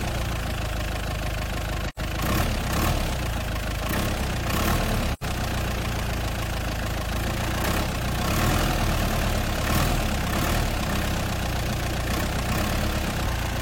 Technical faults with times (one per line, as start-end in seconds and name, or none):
1.88-1.99 AAC frame loss with muting
5.13-5.23 AAC frame loss with muting